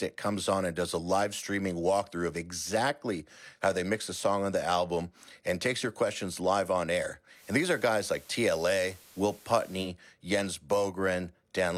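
Right after "questions live on air", at 7.33 s, the receiver does a digital radio blend to analogue, crossfading over 109 ms to the FM feed. Hiss rises to about 25 dB under the signal, and the level shifts about 1 dB until it returns at 9.91 s.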